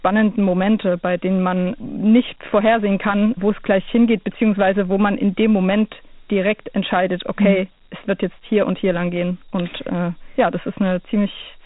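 Speech, heard through Dialogic VOX ADPCM coding for its whole length. Each sample is squeezed into a 4-bit step estimate. The result is plainly audible grit and hiss riding on the speech. Nothing remains above 3.8 kHz, which fits an 8,000-sample-per-second, 32 kbps VOX file.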